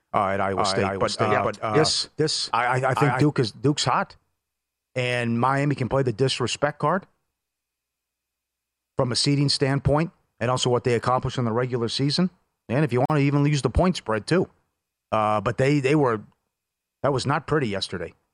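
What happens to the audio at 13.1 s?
At 13.06 s the speech drops out for about 43 ms, resuming at 13.10 s. This is a gap at a join of encoded pieces. The audio was encoded in separate sections and spliced together untrimmed. The encoder's start-up delay and the padding of the previous section's final frame both remain, leaving a short hole of silence. Its edges are smeared by the codec, so the truly silent part is shorter. The speech then continues exactly where it stopped.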